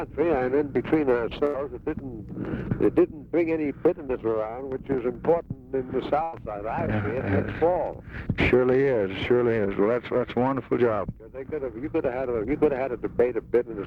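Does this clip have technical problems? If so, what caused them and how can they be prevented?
Yes. Burst of packet loss at 1.45 to 1.56 s and 6.23 to 6.35 s. Roughly 80 and 100 ms went missing. The receiver stretched and faded the last sound, then jumped ahead. A larger jitter buffer and forward error correction would prevent it.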